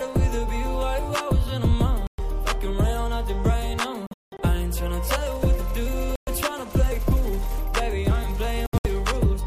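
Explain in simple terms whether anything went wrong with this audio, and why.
The sound cuts to silence at 2.07–2.2 s, 4.07–4.4 s, 6.16–6.29 s and 8.66–8.87 s. It then jumps ahead. This is a Bluetooth dropout, likely from sound packets arriving too late.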